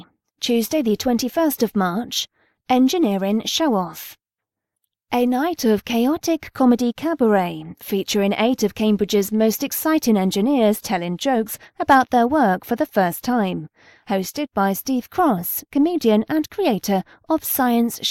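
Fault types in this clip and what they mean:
Crude rate conversion: the speech was resampled by plain linear interpolation with no proper filter, and the grit it leaves points to a step from 44.1 kHz to 48 kHz. The resulting error sits around 30 dB below the speech for the whole clip and is heard as an inharmonic fizz that rides on loud and high-frequency moments. On a spectrogram, faint mirrored images and stray tones appear that don't line up with the voice's harmonics, while the waveform looks nearly clean.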